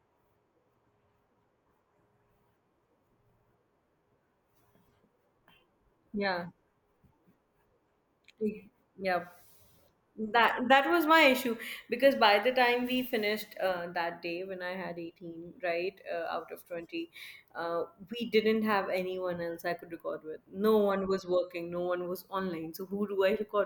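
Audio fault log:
No faults were heard in this speech recording. Nothing in the audio called for a log entry.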